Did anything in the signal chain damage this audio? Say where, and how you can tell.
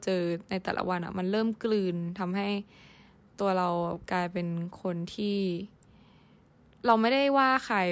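No, nothing in the signal chain damaged this audio.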